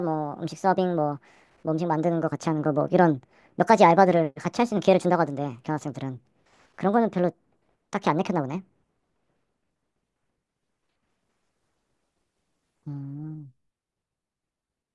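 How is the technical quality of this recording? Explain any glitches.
The whole thing runs fast and high, a wrong sample rate problem. From start to finish the speech plays at 1.5 times its natural speed, and the pitch sits about 7 semitones up, roughly a musical fifth. Both shifts follow the same ratio because the samples are clocked out faster than they were captured, with no conversion in between. That fits audio recorded at 16 kHz being played back at 24 kHz. The result is hurried, chipmunk-ish voices.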